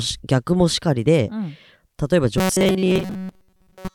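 From 2.38 s to the end, the speech goes robotic and buzzy at 188 Hz, likely repeated short buffers of about 5.3 ms covering most of the stretch.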